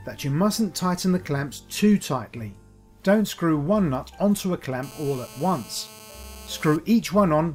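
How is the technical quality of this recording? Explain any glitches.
There's one glitch worth flagging. From 4.83 to 6.76 s there's GSM phone buzz: a nearby handset on a call pulses at 217 Hz, and the circuitry rectifies it into a steady, raspy harmonic buzz about 21 dB below the signal.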